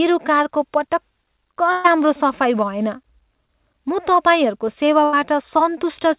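At 1.72 to 1.87 s the speech stretches into a held, fading buzz or hiss for about 120 ms before jumping ahead. This is a burst of packet loss: several packets in a row arrived too late or not at all. The receiver prolonged and faded the last sound, and that stretch of speech is gone. The same thing happens more briefly at 5.04 to 5.16 s, covering about 80 ms.

Between these, at 3.44 to 3.51 s, a short smear or wobble lasts about 40 ms. This is short concealed packet loss. A brief piece never reached the decoder in time, so the receiver extrapolated from the preceding sound and blended back into the real audio. Nothing in the call-path audio reaches above 4 kHz, which fits a G.711 mu-law codec at 64 kbps.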